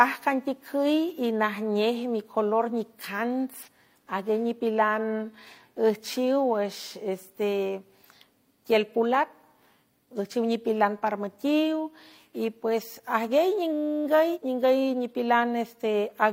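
At 3.63 to 3.68 s and again at 6.88 to 6.92 s, damaged data in a compressed stream produces a short chirp, squawk, click or hole as the decoder misreads broken frames, loses sync and hunts for the next valid header. Each lasts only a few tens of milliseconds.

From 13.73 to 14.05 s, a system hang loop sets in. The hardware keeps replaying the same 10 ms stretch of the ring buffer, repeating it 32 times. The result is a steady, pitched buzz at 100 Hz, little or no audio is lost, and the speech resumes after the loop. The buzz's even, periodic tone sets it apart from the one-off glitches.

At 14.31 to 14.38 s, another burst of damaged compressed data gives a third brief glitch, just after the loop ends.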